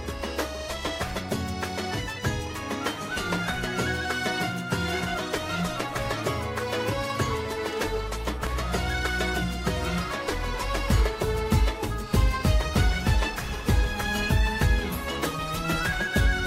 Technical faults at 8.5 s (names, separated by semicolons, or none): loud pop